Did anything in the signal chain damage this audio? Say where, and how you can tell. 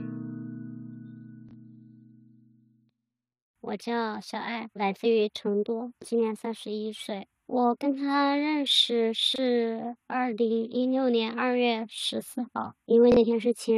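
Yes, at the buffer stage: three brief chunks out of order, at 1.49–1.53, 9.33–9.38 and 13.12–13.17 s. Each is a 23 ms block playing one slot late, so you get a jumbled blip with hard joins.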